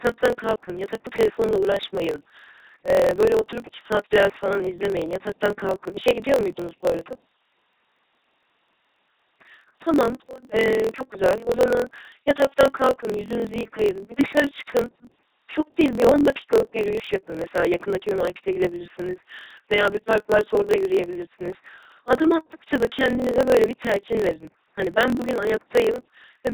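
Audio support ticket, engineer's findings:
LPC-10 vocoder, present for the whole clip. Buzzy, mechanical, robotic speech. Each moment is rendered as either fully voiced or fully unvoiced, so vowels take on a pulse-train drone and consonants become flat hiss. Wrong voicing calls cause stray buzz or noise bursts. Heavy codec damage. The dull top end and the coarse vocal-tract shaping fit a 2.4 kbit/s LPC-10 encode somewhere in the chain.

Block size mismatch (truncated), also present throughout. Steady buzz at about 43.1 Hz under the speech. Delivery is rushed, running 1.12 times faster while pitch stays roughly normal. The probable cause is a buffer handoff between two stages: the writer produces longer blocks than the reader accepts, and each block's tail is discarded. The buzz rate fits a 1024-sample read. The lost tails explain the speed-up while the timbre stays.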